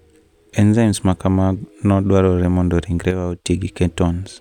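One channel likely drops out from 3.11 to 3.45 s, just after "ma kamano dwarore mondo", so the mono-summed speech falls abruptly by about 6 dB.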